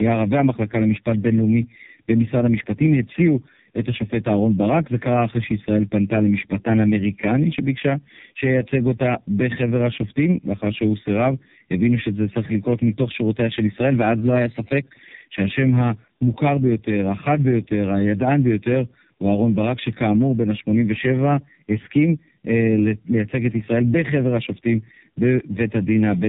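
Tandem speech coding runs throughout: two low-rate speech codecs in series, consistent with iLBC feeding AMR-NB, compound their damage, leaving rough, muffled, warbly speech with nothing above 3.7 kHz. A drift correction step from 14.21 to 14.83 s briefly raises speed about 5% and pitch 88 cents, likely clock-matching software adjusting playback rate, before snapping back.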